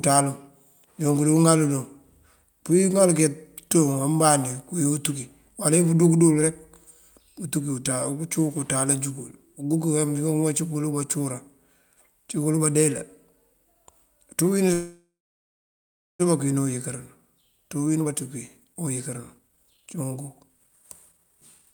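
At 14.73 s packets were likely held up in transit and the jitter buffer ran dry, causing a call audio freeze. The last sound is stretched into a fading buzz or hiss, then about 1.1 s of silence, and speech resumes at 16.21 s where it stopped, now 1.46 s later.

Two jitter buffer speed-ups follow as the overfull buffer sheds that delay by cutting short pitch-period pieces. From 17.79 to 18.14 s speech runs at 125%, losing about a tenth of a second. From 18.6 to 21.73 s it runs at 139%, losing around a second. Pitch stays the same, but the speech sounds hurried.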